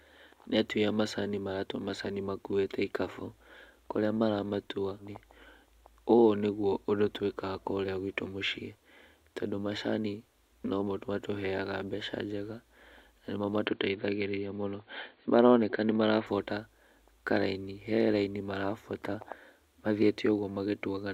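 A speech recording with two faults. Just after "kũrĩa maramatua", a stream segment was likely skipped when it failed to load, so at 4.99–5.05 s the sound jumps ahead with a brief blip and part of the programme is lost. From 13.66 to 16.27 s, the input likely switched to a poorer device: the sound turns dull with nothing above 4.5 kHz, the level shifts by roughly 5 dB, and a faint new noise floor sits far below the speech, with no silence at the switch.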